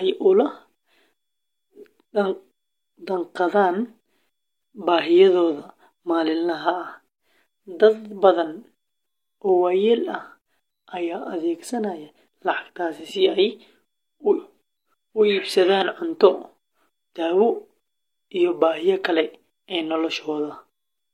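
No audible technical faults anywhere in this speech recording.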